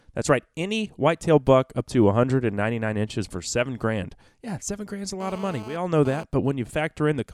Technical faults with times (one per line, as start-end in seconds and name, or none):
5.20-6.24 GSM phone buzz